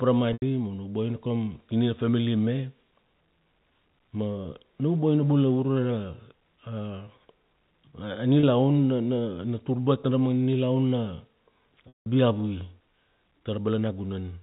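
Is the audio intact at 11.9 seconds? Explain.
No. Packet loss with pitch repetition removes 180 ms from 11.88 to 12.06 s. The last pitch period is repeated as a brief buzzy hold that fades to silence, not an abrupt dropout.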